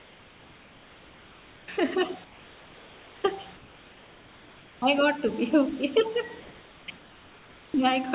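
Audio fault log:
0.0–1.68 s, 2.24–3.24 s, 3.56–4.82 s, 6.4–6.88 s and 6.98–7.74 s, comfort noise in place of the background: in each pause the room's own background gives way to a steady, featureless hiss about 3 dB quieter (about 2 dB at 6.4 s), and it ends the moment sound resumes. A noise gate would leave near-silence, but here the gaps are filled with uniform synthetic noise. The likely cause is discontinuous transmission on the sending side, with the receiver generating noise for the pauses. The band stops at 4 kHz throughout, which fits a G.711 call path.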